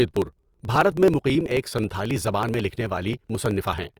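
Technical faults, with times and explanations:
0.06–3.94 s, periodic USB or driver dropouts: every 54 ms a slice of around 10 ms is skipped, some seventy times, as a recurring stall on the USB bus or in the audio driver discards samples, giving an evenly spaced ticking over the speech.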